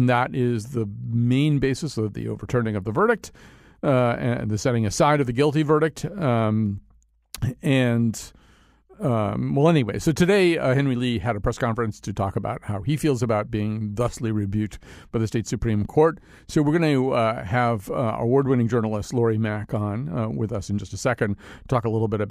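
No technical faults are audible.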